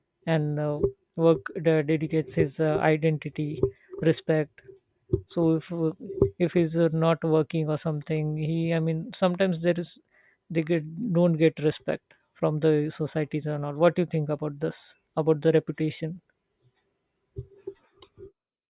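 No audible technical faults turn up anywhere in this speech recording.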